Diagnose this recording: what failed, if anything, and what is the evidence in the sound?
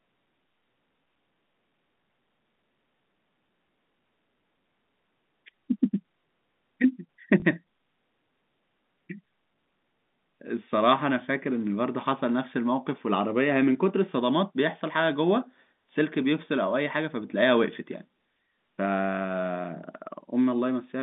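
A small blip at 7.4 s briefly interrupts the speech. The fault is in the network stage: packet loss with last packet repeated. The gap lasts 20 ms, which points to a single lost packet. The receiver replayed the previous packet to fill it. The call runs over G.711 telephone coding within a 150 Hz to 3.6 kHz line band.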